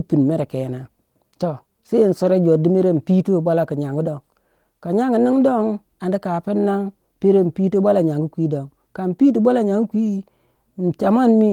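The speech has no technical faults; its Opus voice compression keeps the full band up to about 20.2 kHz with only light coding damage, which points to hybrid mode at around 24 kbps.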